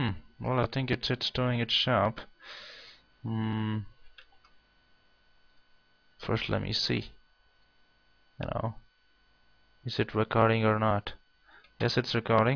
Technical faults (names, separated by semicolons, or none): none